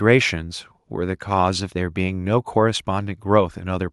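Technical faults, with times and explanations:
No technical faults found in the speech recording.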